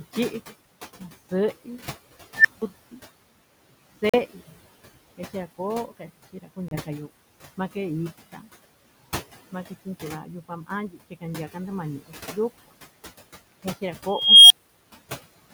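Noise suppressor artifacts run through the whole speech clip. The suppressor pulls the background down by about 16 dB in gaps, then lets it rise back under the talking. The room noise, about 18 dB below the speech, therefore pumps. This differs from ordinary room noise, which would stay steady. The constant in-and-out breathing of the background is processing, not the room.

At 2.36 to 2.62 s an unstable filter takes over. A tone of roughly 2 kHz swells over 90 ms into a loud, clipped squeal. The output then falls silent for about 170 ms while the filter's runaway values overflow and reset. The same failure returns at 14.08 to 14.84 s, higher at roughly 3 kHz. It builds more slowly, over 421 ms, and is followed by a 341 ms silence. The rising whistle before the hole is what separates this from a simple dropout.

Two brief holes follow: 42 ms at 4.09 s and 28 ms at 6.68 s. The speech picks up further along as if it had kept playing. 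These are likely Bluetooth dropouts, packets arriving too late for the headphones. The lengths fit about three and two lost packets. No tone comes before them, and they cut everything, not just parts of syllables.

Speech cut by the noise suppressor appears at 5.87 to 6.10 s, 6.33 to 6.58 s, 8.33 to 8.44 s and 10.92 to 11.23 s. Each time, roughly a tenth of a second of soft speech is dipped by about 8 to 11 dB and sounds swallowed. It is attenuated rather than silenced, which tells it apart from the dropouts.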